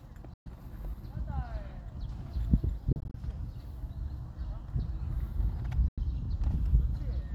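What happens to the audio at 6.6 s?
Nothing goes wrong at 6.6 s; the audio plays through that moment intact, with no dropout, click or distortion.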